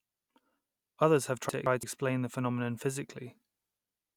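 A speech clip with frames out of order: two adjacent runs of coded frames reached the decoder swapped and were played back in that order. Between 1.49 and 1.83 s, just before "the phenomenon", a stretch of about 0.34 s plays with its two halves exchanged, each block about 171 ms, which fits runs of two frames apiece. The result is a garbled flutter, and no time is lost.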